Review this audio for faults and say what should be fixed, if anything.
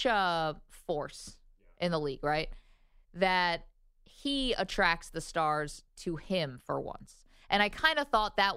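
No faults to fix; nothing in the recording calls for correction.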